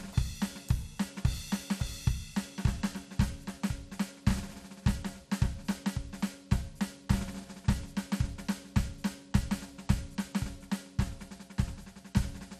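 Throughout the music, the upper sub-bands seem starved of bits, likely from MP2 compression at a rate near 80 kbps, leaving it dull, granular and gurgling. At 5.71 to 5.75 s, DAB burbling appears: a brief burst of reception bit errors corrupts the audio data over a few frames, causing short blips of noise in single sub-bands.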